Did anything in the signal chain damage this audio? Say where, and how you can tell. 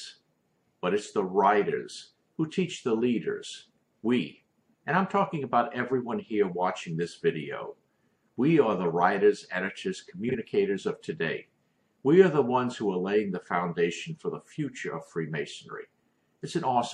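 Yes. MP3 compression damage runs through the whole clip at the codec stage. The sound has a watery, swirling quality with metallic chirps on bright transients and smeared attacks. This is most likely a low-bitrate MP3 encode, which fits a 64 kbps stream. The encoder runs short of bits and zeroes quiet frequency lines that flicker on and off from frame to frame.

Frames out of order occur from 10.29 to 10.35 s, in the network or storage path. Over about 62 ms, two adjacent 26.1 ms blocks play in swapped order, which fits single MP3 frames delivered out of sequence. You hear it as a brief garbled flutter. No time is lost, so the timing after the glitch stays intact.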